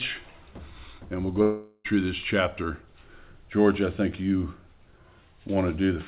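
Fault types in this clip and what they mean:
Long network dropout: from 1.42 to 1.86 s a fading buzz replaces the sound, likely from lost packets; unlike a brief glitch, about 0.42 s is skipped outright.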